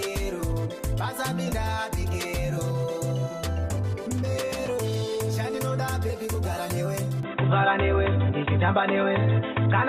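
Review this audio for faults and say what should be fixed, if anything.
At 7.23 s the sound abruptly turns dull and boxy and stays that way to the end, with nothing above 3.8 kHz. The level shifts by roughly 5 dB and new background noise appears about 30 dB below the signal, with no gap at the change. This is likely an input switched to a poorer device, such as a headset call profile. Lock the recording input so the system cannot change devices mid-recording.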